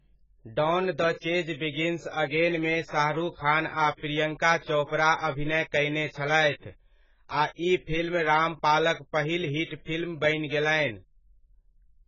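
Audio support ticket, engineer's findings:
Heavy AAC compression throughout the speech, likely the cause. Dull, smeared sound, with nothing above 7.6 kHz. Fits an AAC-LC encode at a very low bitrate, around 12 kbps. Encoder drops the top band and quantises what's left coarsely against its hearing model, so detail goes missing or gets swapped for substitute noise. Worth chasing the encode settings upstream.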